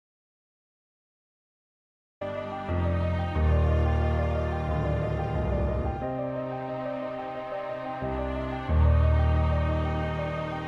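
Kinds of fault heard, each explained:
Audio dropout to silence: the clip opens in silence until 2.21 s, with no room tone, unlike a quiet passage; likely a lost input feed.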